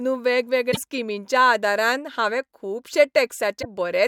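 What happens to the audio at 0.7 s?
Between 0.71 and 0.77 s the speech jumps forward and a chirp, a burst of noise or a short hole takes its place, lasting about 64 ms, just before "स्किमींच्या आदारान हांवें". The likely cause is a broken MP3 bit reservoir. Frames were dropped, and the frames after the gap looked back for borrowed data and decoded bytes from an unrelated frame. The span fits two or three 24 ms frames. On a spectrogram it shows as a narrow vertical band whose texture breaks from the surrounding harmonics, with a discontinuity at its edges on the waveform.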